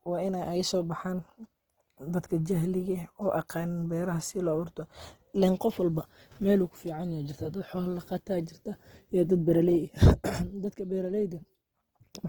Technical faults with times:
0.00-12.28 Opus compression

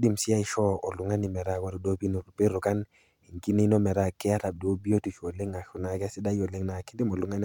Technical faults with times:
none

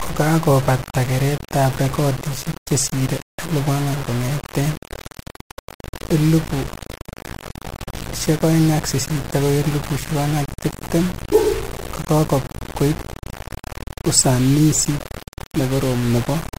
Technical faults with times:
0.00-16.58 low bit depth without dither

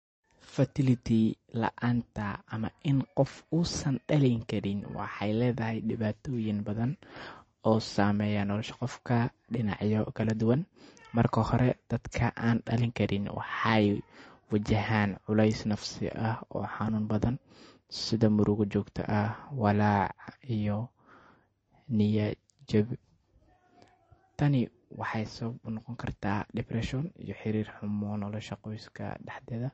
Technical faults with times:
0.00-29.74 MP3 compression

